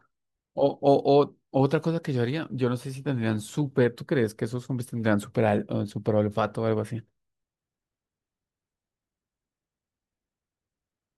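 No technical faults are audible anywhere here.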